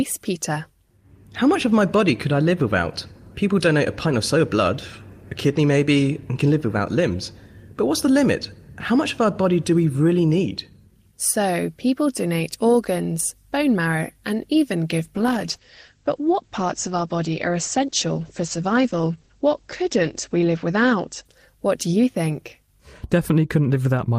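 From 15.17 to 22.01 s, a call bitrate drop makes speech rough and muffled, cut off above 8 kHz. This fits roughly 32 falling to 11 kbps.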